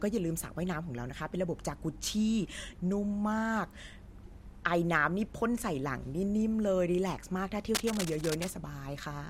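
Speech clip with cable scratch noise from 7.75 to 8.48 s, a rough rustly burst just a few dB under the voice, likely a worn lead or connector getting wiggled.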